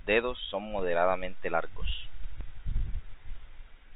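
A DC step runs from 0.79 s to 2.41 s: the waveform's zero line jumps to a new offset at 0.79 s, holds there, and returns at 2.41 s. Each jump is heard as a low thump or click, the kind of shift a converter recalibrating or an offset input being switched in would produce, while the speech itself carries on unchanged through the narrow, 4 kHz-limited band of the G.711 A-law telephone coding.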